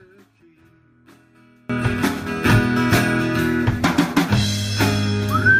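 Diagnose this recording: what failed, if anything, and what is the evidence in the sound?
From 0 to 1.7 s the sound drops by about 33 dB and turns faint before returning to full level. This is likely one channel inverted in the analogue wiring: with one side's polarity reversed, the content common to both channels cancels when summed to mono.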